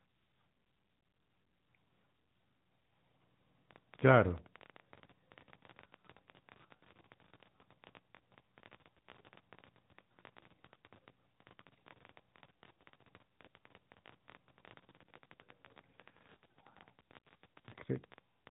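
From the start, the speech carries AMR narrowband mobile codec damage. Nothing above about 3.8 kHz survives, and the pulse-driven vocal-tract model gives a plainly buzzy, synthetic edge that fits a mid-rate mode near 10 kbps. Unlike simple low-pass filtering, the voice itself sounds rebuilt.

From 3.71 s to 18.48 s, a train of clicks runs over the sound at about 14.9 per second, irregularly spaced, around two hundred in all. The alike-shaped ticks peak roughly 15 dB above the signal and persist through pauses, so they are not codec errors. The likely cause is interference or a struggling interface.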